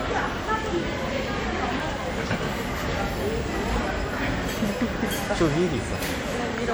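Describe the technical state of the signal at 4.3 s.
At 4.3 s the sound carries plainly audible damage that is likely WMA compression, present across the whole clip. A transform codec spreading quantisation noise over long blocks leaves ringing, washy smearing and a hiss that breathes with the signal, consistent with about 48 kbps.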